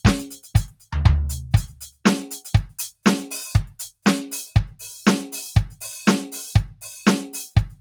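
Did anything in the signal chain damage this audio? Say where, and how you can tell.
Yes. A noise suppressor applied to music sits in the call-processing stage. Throughout, the level pumps by around 5 dB. Held tones and ambience sag while attacks pass. A speech-tuned suppressor is treating the steady parts of the music as noise.

Sound is cut by the noise suppressor twice, from 0.69 to 0.89 s, dropping about 15 dB, and from 1.72 to 2.04 s, dropping about 18 dB. Sustained material sinks and its decay is shortened. The suppressor judged those moments to be noise and clamped them.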